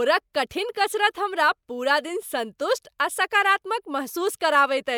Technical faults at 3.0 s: none

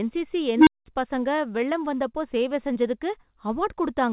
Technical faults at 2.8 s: short concealed packet loss

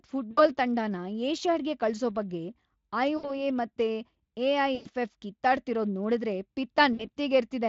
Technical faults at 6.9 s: VoIP packet loss concealed by the speech codec

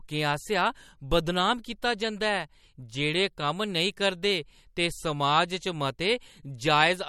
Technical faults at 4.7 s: MP3 compression

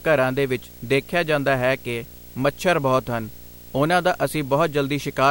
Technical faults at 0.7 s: video or display buzz

